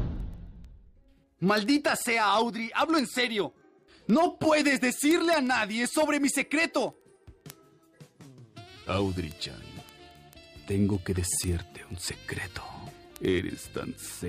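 A receiving device running on its own clock, unlocked from the sender's digital link and drifting by roughly 500 ppm, causes word clock ticks. From 0.12 s to 14.27 s, single-sample slips produce around 300 sharp, uneven ticks, about every 40 ms.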